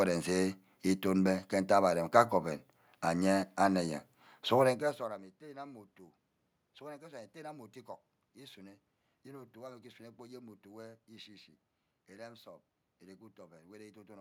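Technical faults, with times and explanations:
Nothing technical goes wrong here; the room background belongs to the recording, and the shift in level around four and a half seconds is just the talker moving relative to the microphone.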